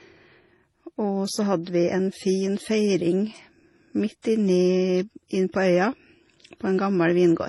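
Transcoding between lossy codecs runs through the whole speech clip, from start to finish. Nothing sounds above 12 kHz, and the sound carries two layers of coding damage at once: the smeared, swirly grain of a low-rate MP3 sitting under the synthetic-sounding highs of HE-AAC. This points to a likely chain of MP3 followed by HE-AAC, both near 32 kbit/s, with the second codec spending its bits re-encoding the first codec's errors.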